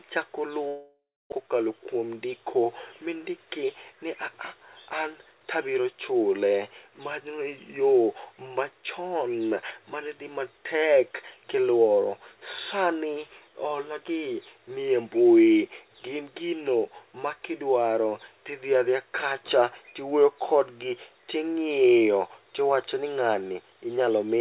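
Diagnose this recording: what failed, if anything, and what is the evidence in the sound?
The stage is the network. From 0.68 s to 1.48 s the speech gives way to a continuation of the last sound that turns into a fading buzz and then about 0.29 s of near-silence. When the speech returns, roughly 0.6 s of it is simply absent. The likely cause is a long network dropout, with the receiver concealing the gap until it gave up. A brief packet loss would be patched smoothly. A local mute would drop straight to silence without the decaying fill and would lose no content.

The stage is the jitter buffer. From 1.94 s to 2.26 s, right after the recovery, the speech runs at about 110% speed while its pitch stays put. That is a jitter buffer speed-up: the receiver had banked extra audio after the gap and drained it by cutting short pitch-period pieces, about 40 ms in all. A clock or sample-rate mismatch would raise the pitch together with the tempo. 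Here only the tempo changes, and only for a fraction of a second.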